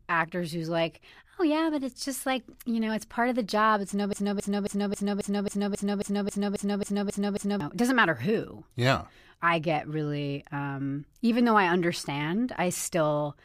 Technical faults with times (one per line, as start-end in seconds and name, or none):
4.13-7.60 broken-record loop